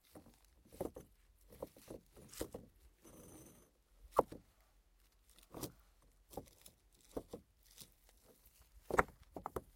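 From start to finish the audio carries a 100 Hz buzz that rises and falls with the signal and disappears in quiet passages. This is a resampler restarted on every block: each chunk, apparently 10 ms long, was converted separately, likely from 48 kHz to 44.1 kHz. At every chunk edge the converter lacked the real neighbouring samples, leaving a small error there. With edges only 10 ms apart, those errors merge into a steady buzz rather than distinct ticks.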